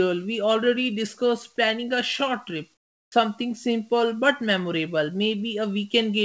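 From 2.74 to 3.12 s, the sender most likely stopped transmitting during the pause under discontinuous transmission, and the receiver filled the gap with comfort noise in place of the background. For those 0.38 s the real room sound, already about 43 dB below the loud passages, gives way to a smooth, featureless hiss that sits about 22 dB lower still, so the background seems to drop out and go flat just before "simple but".

Inside that gap, from 3.08 to 3.12 s, the voice detector was likely slow to register that speech had resumed, producing an onset clipped by the voice detector. The first 40 ms were never sent, and synthetic noise stood in for them, so "simple but" starts abruptly, with its soft beginning missing. Throughout, the call path passes nothing above 8 kHz, which fits the G.722 codec in use.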